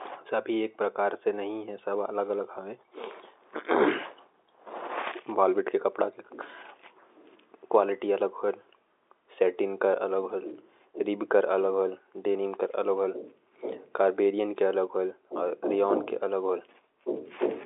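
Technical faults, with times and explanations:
No technical faults heard.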